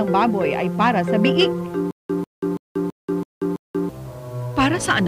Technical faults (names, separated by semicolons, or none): stutter with silent gaps